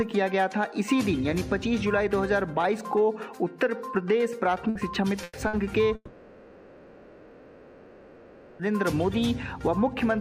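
Three short gaps arrive close together: 4.69 to 4.78 s, 5.23 to 5.38 s and 5.47 to 5.56 s. In each, the last sound is drawn out into a held buzz or fading hiss, and the audio resumes further along with a piece missing. These are bursts of packet loss. Consecutive packets failed to arrive, and the receiver filled roughly 60 ms, then 120 ms, then 60 ms by stretching and fading what it last had.

From 5.95 to 8.67 s, about 2.7 s, the sound first trails off as a fading buzz or hiss. Eventually only silence or a faint steady noise remains. The audio then returns at a later point, with the stretch in between gone. This is likely a long network dropout. Nothing reached the receiver for the whole span, so its concealment ran out and left a hole.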